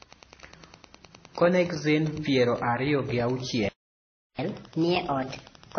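A steady ticking runs under the speech from start to finish, about ten clicks a second and sitting roughly 25 dB below the voice. That rhythm is the signature of Wi-Fi interference: a nearby radio sends its beacon every 102.4 ms, and the audio circuit rectifies each burst into an audible tick, so the clicks keep their even spacing regardless of what is being said.

Across the whole clip the speech also sounds dull and smeared, with nothing above 6.3 kHz and a mix of watery, swirling artefacts that don't come from a single source. This is likely transcoding between lossy codecs, with the audio passing through something like AAC and WMA at low bitrates before ending up as 32 kbit/s MP3. Each later encoder wastes bits reproducing the earlier damage and adds its own, and the lowest cut-off in the chain is the one that remains.

At 3.69 s the speech stops mid-flow and silence holds until 4.39 s, a gap of about 0.70 s. 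This is a playback stall, likely caused by the player running out of buffered data or having its thread blocked, so the output stayed empty until it recovered rather than the speaker pausing.

From 4.39 s to the end the speech comes back noticeably fast and high-pitched, running at 1.25 times normal speed and about four semitones sharp. This is catch-up at higher speed. The player resamples its backlog to recover the time lost in the stall, and because resampling shifts speed and pitch together, the voice takes on a chipmunk-like lift for the rest of the clip.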